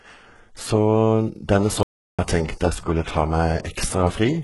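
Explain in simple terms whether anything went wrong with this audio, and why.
The audio went through heavy HE-AAC compression, likely at a very low data rate. That method keeps only the lower sounds and fakes the treble by copying lower parts upward, with nothing real above about 11.5 kHz. The s sounds in this speech turn gritty, metallic or lispy.

The recording also suffered an audio dropout to silence, likely because the input signal was briefly lost while recording continued. From 1.83 to 2.19 seconds, about a third of a second, the speech cuts to total silence, with no background sound at all, and then resumes.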